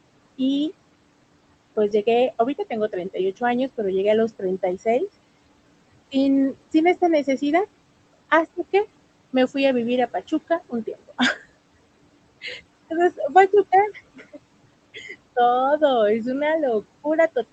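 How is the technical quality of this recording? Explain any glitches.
The recording has two noise-suppression problems: processing artifacts throughout and two brief moments where speech itself is pulled down.

Noise suppressor artifacts, throughout: the suppressor cuts steady background by about 21 dB frame by frame, so the noise sinks between phrases and rises under the voice.

Speech cut by the noise suppressor, at 10.48 to 11.2 s and 14.16 to 14.38 s: the suppressor mistook parts of the speech for noise. It dropped them by up to about 16 dB and about 13 dB, leaving syllables swallowed for roughly a tenth of a second or more.

The room noise sits about 18 dB below the speech, and the call codec's band limit shows as a top cut-off near 8 kHz.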